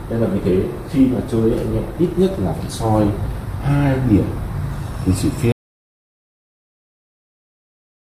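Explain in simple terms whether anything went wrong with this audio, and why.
Audio dropout to silence from 5.52 s to the end: the sound abruptly cuts to dead silence, likely because the input was lost while recording carried on.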